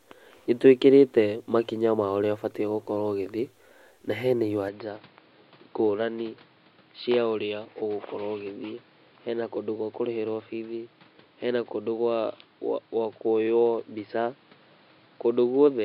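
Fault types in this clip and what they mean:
Input switched to a poorer device: from 4.69 s, right after "ũgithiĩ na hena", the speech turns duller and boxier with no gap, and stays that way to the end. Nothing is left above about 5.1 kHz, the level falls by around 5 dB, and a new background noise sits roughly 30 dB below the speech. This is likely the recording input changing mid-take to a narrower-band microphone or headset profile with its own tone and noise.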